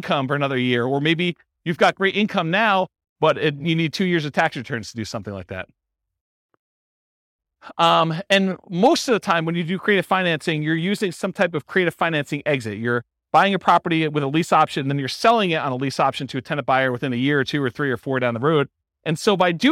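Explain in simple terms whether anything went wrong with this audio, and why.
Listening to the recording, nothing stood out as having gone wrong with the sound.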